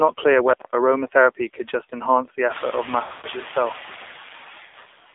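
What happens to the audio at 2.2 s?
At 2.2 s, as across the whole clip, two faults are present together.

The first is noise suppressor artifacts. The suppressor judges which frequency bands hold steady background noise and pulls them down frame by frame, here by about 6 dB. The residue left therefore sinks between the words and rises under them instead of staying smooth. Because the suppressor follows the noise level, this unsteadiness tracks the gaps and the speech, which sets it apart from codec warble that swirls through the background noise. Just after this moment, around 2.5 s, the room noise rises, still well below the speech.

The second is the AMR narrowband mobile codec. The speech is squeezed into a telephone band of roughly 300 Hz to 3.6 kHz, so it sounds boxy and muffled. It is rebuilt from a vocal-tract model excited by a few pulses per short subframe, and at this plainly audible level of damage, which fits the 7.4 kbps mode, it takes on a buzzy, synthetic edge. 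A plain low-pass filter would only dull the sound, while this codec also makes it artificial.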